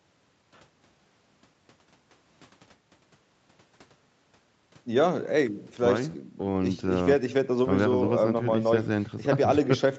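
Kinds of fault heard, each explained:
No faults can be heard in this speech recording.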